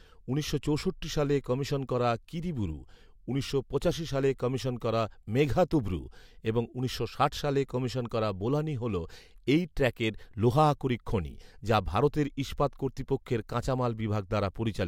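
No technical faults can be heard anywhere in the recording.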